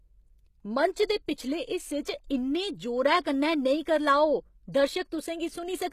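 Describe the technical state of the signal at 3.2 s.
At 3.20 s a pre-echo runs to 3.25 s, about 49 ms long. A sharp attack lands late in a transform block. The codec's quantisation noise, sized for the loud part, spreads back into the quiet gap. A brief hiss precedes the onset, which sounds softened and smeared.

Underneath, the speech carries plainly audible codec damage, likely from HE-AAC compression at a rate that fits about 20 kbps. Nothing reaches above 14.9 kHz. The treble is rebuilt by copying lower bands upward, so sibilants turn gritty and metallic.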